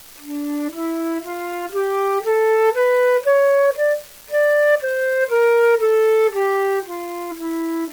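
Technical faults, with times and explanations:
Throughout, unreliable data bit: one line in the digital data path is marginal, so its bit flips in a random share of samples. Each wrong bit pushes that sample off by a fixed amount of about -26 dBFS, making a spike of identical height wherever it lands. Because these errors keep arriving whether or not anything is playing, the audio carries a constant crackle or fizz that goes on in the quiet gaps too.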